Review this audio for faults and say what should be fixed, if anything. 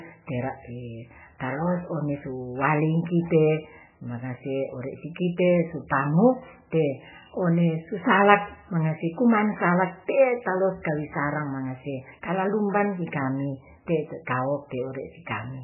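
Throughout the speech, the sound is heavily damaged: thin and muffled, with nothing above 3 kHz, and a watery, swirling texture where weak detail flickers in and out between frames. Sibilants and consonant attacks come out smeared and chirpy. The likely cause is heavy MP3 compression. Starved of bits, the encoder has cut the treble at a fixed point and discarded quiet frequency lines frame by frame. The damage fits a very low bitrate of around 8 kbps. To prevent it, keep a lossless original and encode at a far higher bitrate, such as 128 kbps or more for speech.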